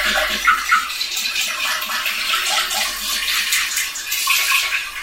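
From start to finish, every event arrives twice: a doubled audio track, with a second, full-band copy trailing the first by roughly 200 ms at about the same level. The likely cause is the signal being captured again through a slower path and mixed back in. It sounds like a crisp, undecayed echo with no room colour. On a waveform each transient has an identical twin shifted right; a spectrogram shows every onset repeated at that fixed offset.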